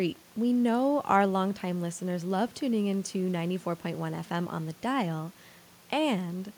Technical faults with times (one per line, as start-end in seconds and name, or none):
none